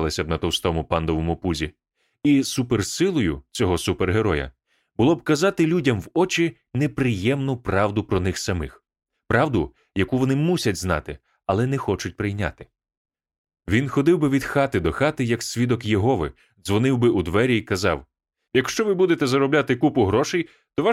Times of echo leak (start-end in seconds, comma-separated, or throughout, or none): none